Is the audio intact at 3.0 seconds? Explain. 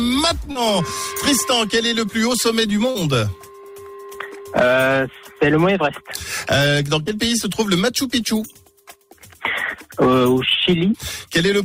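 No, there's a short concealed packet loss from 2.91 to 2.97 s. About 40 ms went missing and the receiver extended the preceding sound, so it comes through as a brief smear.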